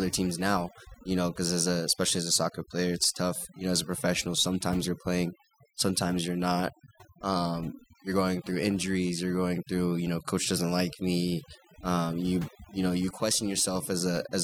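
From start to finish the background sits in near silence broken by twinkling specks, and the quieter parts of the speech seem to dissolve. This is overdone noise removal. A noise reduction process was pushed too hard on a noisy recording, pulling individual frequency bands down or shutting them off whenever they came close to its noise estimate. Softer components of the speech were removed along with the noise.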